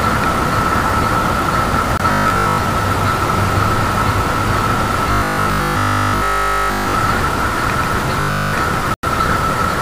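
The audio has two kinds of dropout fault. Blocks of digital silence occur at 1.97 to 2.00 s (23 ms, which fits a 1024-sample buffer) and 8.94 to 9.03 s (93 ms, which fits a 4096-sample buffer), where the signal cuts out hard to silence and back with no fade. The first is heard as a short hole and the second as a longer one. Robotic sound from repeated short buffers appears at 2.12 to 2.60 s, 5.12 to 6.94 s and 8.21 to 8.53 s. The sound turns into a rigid, metallic 50 Hz buzz, likely caused by the software looping the last 20 ms whenever fresh audio arrived late, so that the real material in those spans is skipped. Roughly 70% of the first span is repeated audio, and nearly all of the other two spans is.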